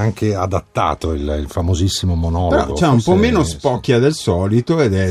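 Nothing stands out here; the sound runs along without any technical hiccups worth pointing to.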